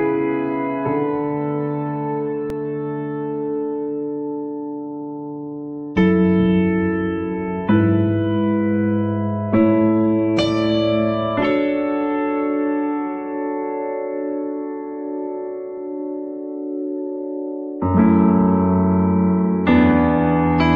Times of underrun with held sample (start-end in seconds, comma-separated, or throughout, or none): 2.50